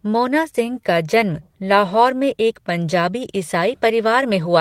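Nothing in this recording stands out as a technical fault, so there's no problem to point to at any moment.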